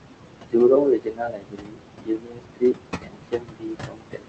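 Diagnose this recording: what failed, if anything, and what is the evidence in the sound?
The call-processing stage failed: noise suppressor artifacts run through the whole clip. The room noise, sitting only about 7 dB below the speech, is pulled down by about 21 dB in the gaps and then lets back in under the speech, so the background pumps with the talker. This happens because the suppressor is deciding band by band, frame by frame, what counts as steady noise and muting those bands.

The same suppressor also cut the speech. At 0.41 to 0.56 s, around a tenth of a second of speech drops by as much as about 22 dB and sounds swallowed. From 0.8 s to the end at 4.28 s, the cutting recurs with the same depth of about 22 dB, leaving parts of the speech faint. With the speech only about 7 dB louder than the room noise, the suppressor misreads these low-level speech components as noise and attenuates them along with the background.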